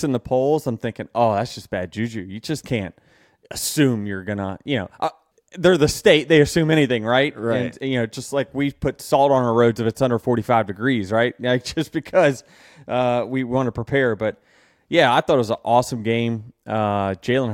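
At 11.69 s the speech carries one sharp click, heard as a thin vertical line through the spectrum. The likely cause is dropped samples: roughly a single sample went missing, so the waveform jumps straight from one value to a later one. Unlike a dropout, no stretch of audio goes silent and nothing is lost to the ear, because the gap is only a fraction of a millisecond. What remains is the isolated tick of the discontinuity.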